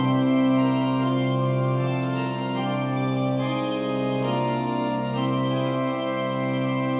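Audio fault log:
No fault to log for this audio.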